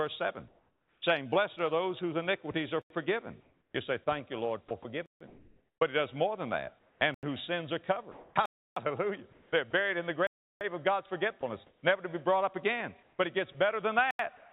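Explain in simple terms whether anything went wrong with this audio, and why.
The audio drops out six times, each a block of digital silence. It cuts to dead quiet and back abruptly. This happens when the audio isn't delivered in time. The gaps come at 2.82 s (85 ms), 5.06 s (146 ms), 7.14 s (85 ms), 8.46 s (309 ms), 10.27 s (341 ms) and 14.11 s (85 ms). The short gaps are brief holes. The longer ones are clear holes. The 85 ms gaps fit a 4096-sample buffer. The audio came through a phone-call line, which carries nothing above 4 kHz.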